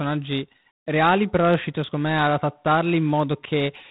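From the start, the speech carries a harsh, rasping hiss that rises and falls with its level, and nothing passes above 3.9 kHz. This is plainly audible G.726 ADPCM damage, consistent with 24 kbit/s, where too few bits per sample coarsen each predicted difference.

From 0.13 s to the end, faint regular ticks come about every 50 ms, roughly twenty a second, forming a soft rattle under the speech. These are likely clock slip clicks: two unsynchronised clocks differing by around 500 parts per million, with single samples dropped or repeated as the error accumulates.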